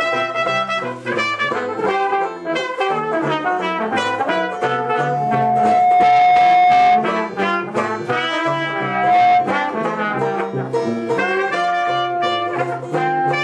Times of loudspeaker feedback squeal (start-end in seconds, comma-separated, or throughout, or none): 3.73-7.16, 8.77-9.56